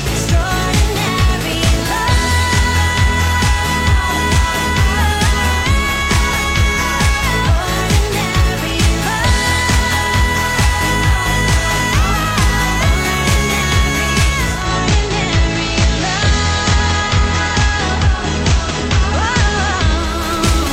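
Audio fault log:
14.36–20.31 s, digital radio blending to analogue: the receiver lost its digital stream and cross-faded over about 378 ms to the station's FM broadcast, returning near 20.31 s. A broadband hiss rises to roughly 25 dB below the programme, with no jump in level. On a spectrogram a noise floor fills the gaps; the waveform envelope stays steady.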